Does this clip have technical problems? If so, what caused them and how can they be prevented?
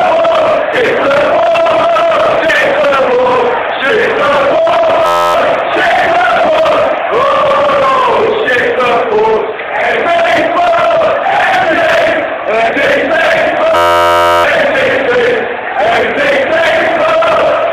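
Yes. At 0.72, 2.39, 10.01, 11.64 and 12.66 s, compressed frames were skipped: whole frames were missing or rejected by the decoder. The audio jumps forward by a few tenths of a second each time, consistent with several 46.4 ms frames dropped. Checksummed storage or transfer, with retransmission of damaged data, would prevent it.

From 5.06 to 5.34 s and from 13.76 to 14.44 s there is a system hang loop. The computer or driver stalled while the sound hardware kept replaying one ring buffer, so a single 11.61 ms slice repeats exactly, which fits a 512-sample buffer. Repeating at 86.1 Hz, it becomes a steady buzz. Giving the audio thread real-time priority and fixing the driver stalls would prevent it.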